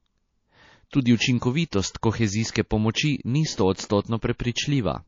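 Throughout the speech, dulled treble and a watery, swirly texture are audible, likely from MP3 compression starved of bits, consistent with about 32 kbps.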